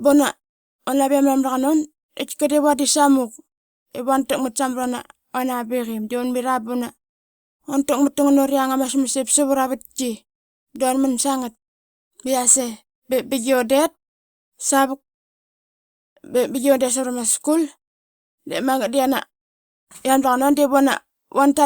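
The speech signal is intact, with no dropouts, distortion or timing faults, and the background falling away to silence in the pauses before each phrase returns is the expected behaviour of gating during quiet stretches.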